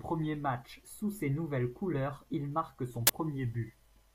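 From 0.45 s to 2.91 s the speech plays about 6.4% fast, raised by roughly 107 cents, a little over a semitone, and then drops back to normal pitch and pace. This is likely a drift correction step: clock-matching software changed the playback rate in one jump to manage its buffer. On a spectrogram the harmonics sit visibly higher across that stretch and step down at its end, and the waveform's cycles are correspondingly compressed.

At 3.07 to 3.09 s an uninitialised buffer produces a burst of harsh digital noise lasting about 23 ms, which fits a 1024-sample block played before any audio was written into it. Leftover memory was read as samples, giving a loud, abrupt blast. The waveform shows a dense slab of large values with hard edges, and the spectrogram shows a bright vertical band spreading across the whole frequency range.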